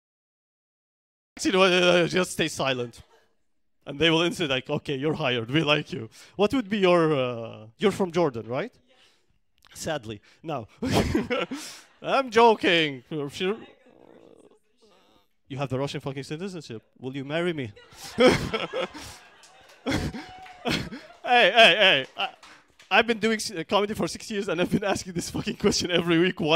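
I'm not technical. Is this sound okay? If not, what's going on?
No. For the first 1.37 seconds there is nothing at all, just dead silence, and then the sound jumps in abruptly, already in full swing instead of building up or fading in naturally. This is a cut-off start: the recording began a moment too late, so whatever was happening before 1.37 seconds was never captured, and the audio picks up partway through a sound rather than at its beginning.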